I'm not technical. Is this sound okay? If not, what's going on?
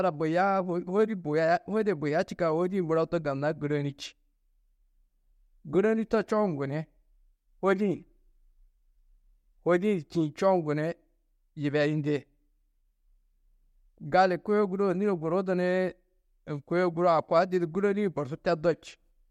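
Yes, the recording holds steady throughout, with nothing going wrong in how the sound was captured or delivered.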